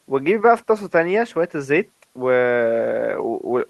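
No technical faults can be heard in this recording.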